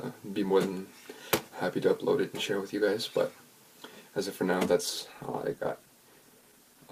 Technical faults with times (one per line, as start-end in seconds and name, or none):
4.67-6.92 call bitrate drop